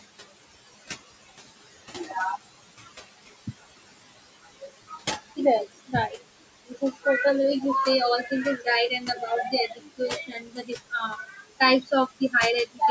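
Throughout this speech recording, the background noise sinks away between phrases and swells back underneath them. These are noise suppressor artifacts: the suppressor estimates which frequency bands hold steady noise in each short frame and turns those bands down, here by about 19 dB. The room noise, sitting about 13 dB below the speech, is what it is chasing. In several places the speech itself goes faint or swallowed: between 4.43 and 5.38 s, 5.75 and 6.22 s, 6.68 and 7.06 s, and 12.66 and 12.81 s, brief stretches of a few hundred milliseconds or less lose their soft edges, and from 8.29 to 12.34 s about one and a half seconds in total are dulled. This is speech cut by the noise suppressor, which mistook quiet consonants, word endings or low-level passages for background and lowered them by about 15 to 19 dB along with the noise. The call's microphone processing, with nothing above 8 kHz, is part of the normal call path.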